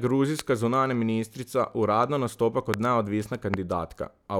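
Three loud pops land on this speech, each a single sharp crack of about 20 ms standing well above the level of the talking, something like 20 dB hotter. The first hits at 0.39 to 0.41 s, right before "zunanja ministrica uradno nastopa"; the second at 2.74 to 2.76 s, just after that same phrase; the third at 3.54 to 3.56 s. The speech carries on underneath each one. That's most likely a stray voltage spike from a switch, connector or static discharge getting into the chain.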